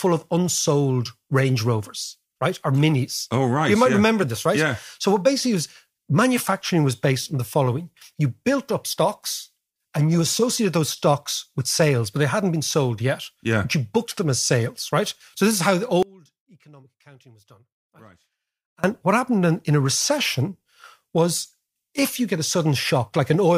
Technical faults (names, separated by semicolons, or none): audio dropout to a faint residue